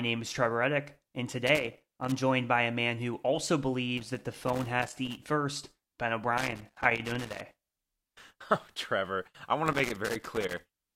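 A speech clip with loose connector crackle in four bursts, at 1.47–2.18 s (before "by a man who"), 3.97–5.17 s (after "a man who also"), 6.37–7.58 s and 9.66–10.91 s (after "I want"). A dirty or worn contact keeps breaking and remaking, chopping the signal into irregular scratchy clicks. This shows as jagged dropouts and spikes in the waveform and as scattered broadband vertical streaks on a spectrogram.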